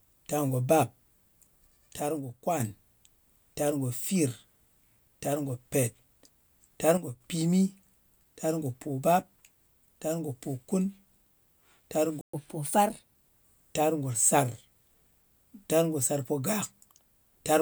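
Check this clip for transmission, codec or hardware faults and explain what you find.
Four faults affect this speech clip: two channel dropouts, one playback stall, and a burst of accelerated catch-up playback.

One channel drops out from 2.00 to 2.60 s and again from 6.97 to 7.21 s: level falls abruptly by about 6 dB, likely from losing one stereo side before the mono sum. Unlike a fade, the step is instant and holds steady.

A playback stall at 12.21 to 12.33 s leaves 122 ms of silence, likely a starved or blocked player. Unlike a dropout, the sound stops completely rather than thinning.

Catch-up at higher speed runs from 12.33 to 13.15 s, starting on "tar ngo sar": playback at 1.15x, raising pitch about two semitones as the backlog clears, then returning to normal.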